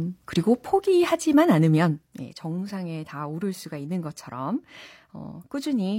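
A speech recording carrying one burst of damaged data in a compressed stream, lasting about 50 ms from 3.07 to 3.12 s, just before "오를 수가 있는 것처럼". Corrupted bytes there make the decoder misread frames and lose sync until it finds the next valid header, producing a brief disruption. On a spectrogram it shows as a short vertical break in the harmonic bands; the waveform has an abrupt discontinuity.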